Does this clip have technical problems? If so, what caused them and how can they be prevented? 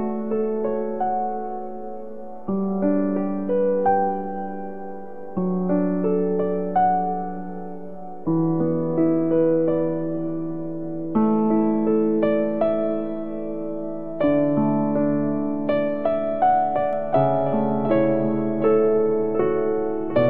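Yes. A doubled audio track starts abruptly at 16.93 s and lasts to the end: a second full-band copy trails about 0.7 s behind, roughly 10 dB quieter, with no decay or room colour. It is likely the same signal captured again through a slower path or left duplicated in an edit. To prevent it, route each source through only one capture path and check edits for overlapping duplicate regions.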